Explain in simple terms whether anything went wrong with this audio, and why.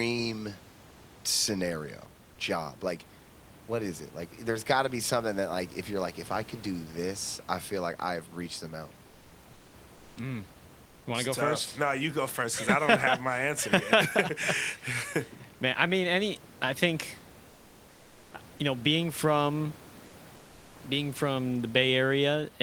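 In four short pauses, at 9.55–9.73 s, 9.97–10.15 s, 17.53–18.31 s and 20.35–20.71 s, the real room background is replaced by comfort noise: a flat, featureless hiss, slightly quieter in three of them. The likely cause is discontinuous transmission, where the sender goes silent between phrases and the receiver fills the gap.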